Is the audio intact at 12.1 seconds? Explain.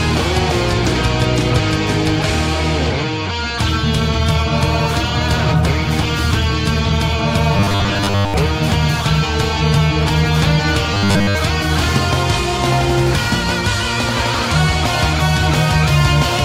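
Yes, the audio is intact at 12.1 seconds, with no dropout, click, distortion or other fault at that moment.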